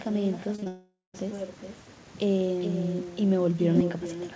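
Short speech clip over a call link whose audio stops at 8 kHz, which fits a G.722 wideband path. The big problem running through the whole thing is echo with no canceller: the far end is clearly playing the call out loud and its mic is feeding it straight back, so every phrase gets a thinner copy about 10 dB down, trailing around 0.4 s behind. Early on there's a run of short concealed packet loss, three back-to-back holes of about 20 ms each at 0.56, 0.60 and 0.64 s. The decoder patched each one by stretching the last bit of sound, so it comes across as a quick smear and wobble rather than a clean gap. That rolls straight into what sounds like a long network dropout from 0.68 to 1.16 s, likely a stretch where nothing arrived at all. The receiver keeps extending the last sound as a fading buzz or hiss, then there's roughly 150 ms of dead silence before the audio picks up again further along, with nearly half a second simply gone.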